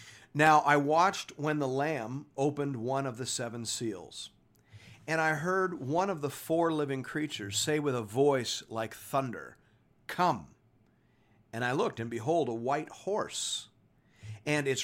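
Periodic USB or driver dropouts run through this speech from 0.47 s to 14.49 s, one every 0.5 s. Each time, something stalls the USB transfer or the audio driver, and a sliver of roughly a tenth of a millisecond is skipped outright rather than filled with silence. About thirty of these tiny gaps splice the waveform together with a jump, giving evenly spaced ticks that are audible only while speech is present.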